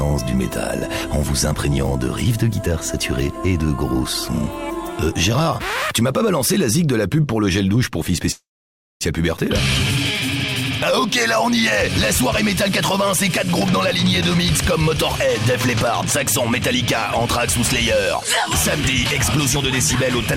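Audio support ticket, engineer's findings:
Call audio freeze, 8.31 to 9.03 s. Last bit of sound smeared into a short fading buzz, then about 580 ms dead quiet. Likely jitter buffer ran dry on late packets. Resumes right where it left off, nothing lost, but roughly 0.7 s of extra delay added.

Jitter buffer speed-up, 14.03 to 15.46 s. Sound runs about 5% fast, same pitch, a touch rushed. Buffer trimming its backlog by clipping out tiny pitch-period chunks, roughly 70 ms total.

Another one, 17.93 to 18.25 s. Sharper at about 12% fast, around 50 ms cut. Same trick, more noticeably hurried.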